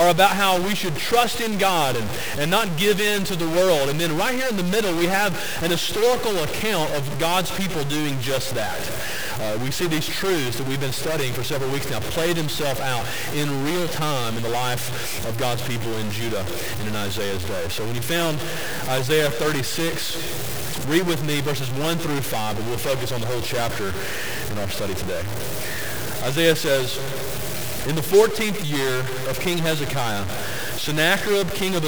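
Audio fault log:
Throughout: stuck bit. Harsh, buzzy distortion runs through the sound, and pauses fill with gritty noise instead of silence. Likely one data bit is held fixed, shifting roughly half the samples by a step of about -20 dBFS, a bit high enough to make that noise plain.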